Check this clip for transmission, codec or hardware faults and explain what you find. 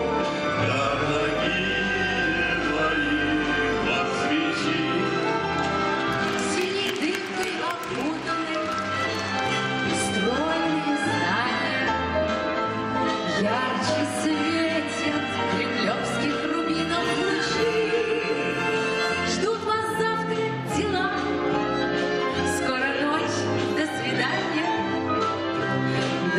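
There is one hardware fault, a burst of mains buzz from 0.87 s to 3.91 s. Sharp switching spikes, such as those from a dimmer, a rectifier or an unshielded lead, get into the audio path twice per 50 Hz cycle. That fills the spectrum with harmonics up to several kilohertz. The result is a steady, raspy buzz roughly 15 dB below the signal. A plain mains hum would be a smooth, low tone, while this buzz has an edgy, rasping texture.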